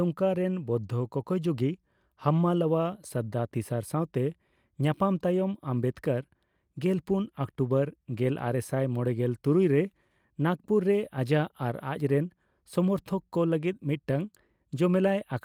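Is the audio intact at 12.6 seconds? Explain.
Yes, the audio is intact at 12.6 seconds, with no dropout, click, distortion or other fault to be heard at that moment.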